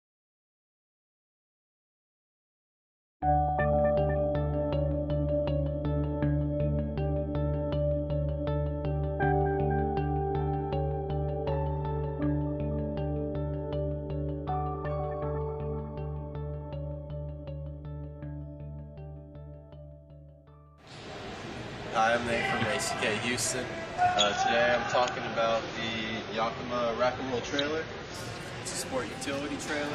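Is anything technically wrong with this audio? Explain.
Yes. From 24.1 s to 28.1 s the audio plays as an adaptive stream at a lower bitrate. The quality drops suddenly, with no gap, and the treble vanishes. Nothing is heard above 7 kHz. Codec artefacts grow more noticeable. When a connection slows, the player switches to a cheaper encoding to keep playing. The sound points to a step from about 96 kbit/s down to about 24 kbit/s AAC. Full quality returns just as abruptly.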